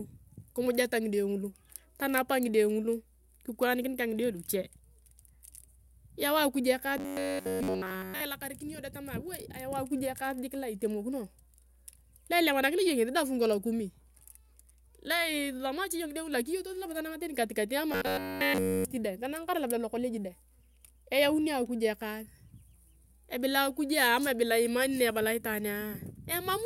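A speech recording with two problems. Mains hum runs through the entire clip: a steady 60 Hz tone, with some of its low harmonics, sits about 30 dB below the speech. It comes from power-line current coupling into the signal path, typically through a ground loop or a nearby transformer. The speech also turns into a rigid, metallic buzz from 6.98 to 8.20 s and again from 17.92 to 18.85 s. This is the robotic sound from repeated short buffers. In both stretches the buzz has a fixed pitch of 93.8 Hz, and the output appears to consist entirely of repeats. The likely cause is audio arriving too seldom, so the playback side loops a short chunk of about 10.7 ms while the real audio is skipped.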